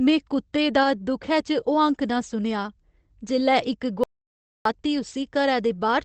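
At 0.83 to 0.85 s, just after "कुत्ते दा", there is a lost packet rebuilt from error correction. The 20 ms stretch fits one missing packet. The next packet held a low-bitrate spare copy. The decoder played it, so nothing drops out. That short moment sounds rougher and grainier.

At 4.04 s, right after "जेल्लै इक", the sound cuts to dead silence for about 0.62 s. This is an audio dropout to silence. No room tone remains in the gap. Whatever was said in the meantime is gone. The likely cause is lost input while the recorder kept writing silence.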